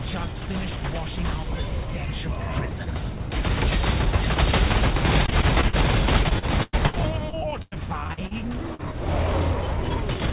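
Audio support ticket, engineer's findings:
Repeated packet loss (robotic sound), 5.26–5.75 s and 6.23–8.33 s: choppy stretches with pieces missing. Network/jitter buffer dropping packets; decoder keeps extending the last sound to cover each hole, then the next one arrives. Roughly a quarter of each stretch is concealed, with gaps up to 100 ms.

Short concealed packet loss, 8.75–8.81 s: brief smear as roughly 40 ms of audio fails to arrive in time. Decoder bridges it by continuing the preceding sound, then blends back in. Single isolated event. Band edge sits at 4 kHz, consistent with G.711 narrowband.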